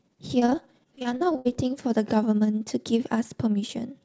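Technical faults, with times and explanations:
0.40–1.57 s, repeated packet loss (robotic sound): about a dozen short holes in the speech, the longest around 63 ms, with roughly 300 ms missing in total and about a quarter of the stretch patched by stretching the previous sound forward. These repeated fills give a choppy, robotic quality. On a spectrogram, smeared, flattened harmonic blocks alternate with normal speech below a 7 kHz ceiling, which fits a wideband call codec. The waveform shows repetitive, evenly periodic patches.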